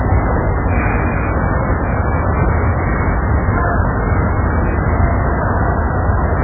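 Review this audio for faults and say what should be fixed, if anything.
The whole recording carries heavy MP3 compression damage, likely from an encoder starved of bits, as a very low bitrate around 8 kbps would be. Nothing survives above 2.5 kHz, and weak frequency lines flicker frame to frame, giving a watery swirl that a plain low-pass filter wouldn't produce. Re-export from the original source at a much higher bitrate, or in a lossless format.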